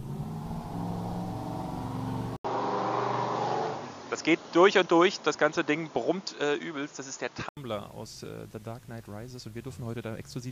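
At 2.37 s the sound drops out for 80 ms. It returns dull, with nothing above 7 kHz and a faint new noise floor. Loudness barely changes. Full clarity returns at 7.57 s. The likely cause is an input switched to a poorer device.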